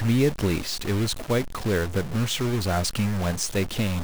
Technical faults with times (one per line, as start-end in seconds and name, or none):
0.00-4.04 stuck bit